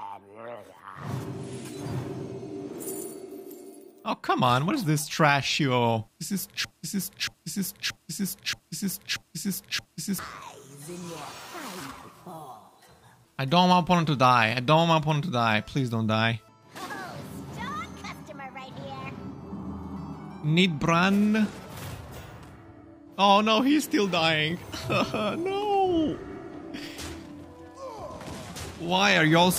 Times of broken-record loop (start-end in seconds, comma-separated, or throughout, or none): 6.65-10.19